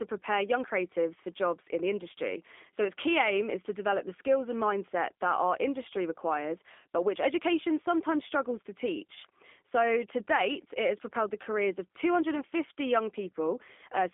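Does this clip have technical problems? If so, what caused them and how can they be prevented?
Yes. The speech has passed through a G.729 codec for its whole length. That codec rebuilds the voice from a vocal tract model, a pitch predictor and a few pulses per frame, and the plainly audible roughness and slightly synthetic edge fit an 8 kbit/s G.729A stream. The line band runs from 250 Hz to 3.5 kHz. On a spectrogram, energy stops sharply at 3.5 kHz and is thin below 250 Hz, and harmonics look smeared and grainy. To prevent it, use a wideband codec such as G.722 or Opus where the network allows.

Between 9.15 and 9.18 s there is VoIP packet loss concealed by the speech codec, which fits a single lost 10 ms frame. The decoder filled the gap by extending its last pitch and filter with falling gain. Because each frame builds on the one before, the voice stays weak or distorted for tens of milliseconds after packets return. 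On a waveform this shows as a short stretch of extrapolated signal with reduced amplitude. To prevent it, give voice packets priority with QoS and use forward error correction or a larger jitter buffer.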